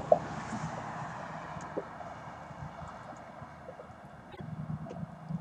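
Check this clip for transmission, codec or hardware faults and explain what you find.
One fault stands out, a brief garbled flutter near the end. From 4.31 to 4.41 s, two frames are out of order. Two adjacent blocks of about 26 ms, which fits single codec frames, were swapped and played back in that swapped order.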